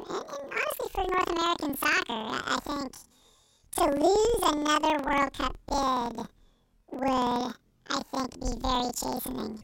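A speech recording affected throughout by planar audio read as interleaved. Each block of roughly 46 ms, which fits 2048-sample blocks, plays twice at double speed, left then right, so the voice sits an octave high with a 21.5 Hz flutter while overall pacing holds.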